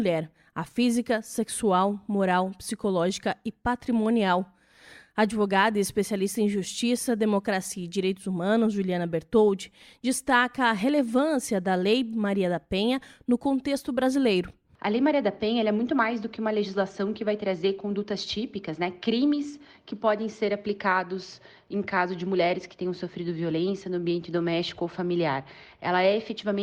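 No technical faults can be heard anywhere in the audio. Nothing in it calls for comment on the playback side.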